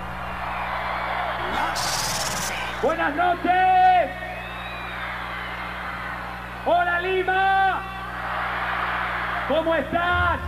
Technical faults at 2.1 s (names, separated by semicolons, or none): mains buzz